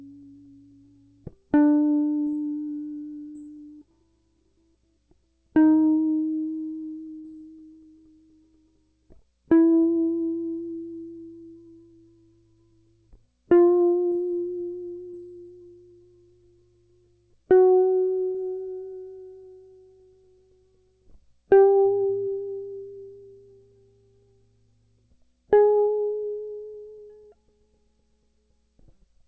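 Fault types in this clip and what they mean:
Short concealed packet loss: About 30 ms of music goes missing five times. The receiver patches each gap by extending the last sound, heard as a brief smear or wobble.
Burst of packet loss: At 7.19 s, about 60 ms is lost. The last sound is stretched and fades, then the music resumes with that stretch missing.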